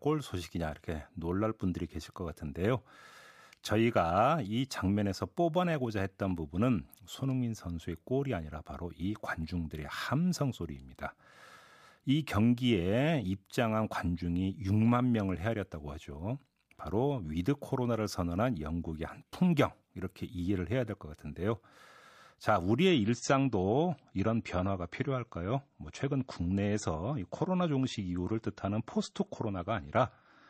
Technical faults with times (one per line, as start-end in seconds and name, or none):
22.88-30.49 adaptive stream at a lower bitrate